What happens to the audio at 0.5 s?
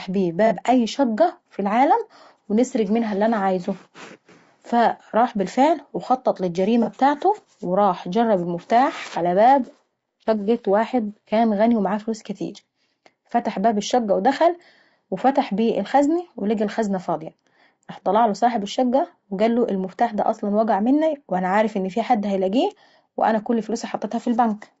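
From 0.47 to 0.52 s there is an AAC frame loss with concealment, just before "شقة في العالم ونسرق". The sound points to a single lost frame, roughly 30 ms of audio. The decoder patched the gap by reusing the last good spectrum, so the moment sounds briefly smeared and noisy rather than dropping out. Underneath, the speech has a rough, grainy texture with noise between harmonics. That is likely low-delay AAC compression (AAC-ELD) at about 32 kbps. Its short frames resolve pitch harmonics poorly at that rate.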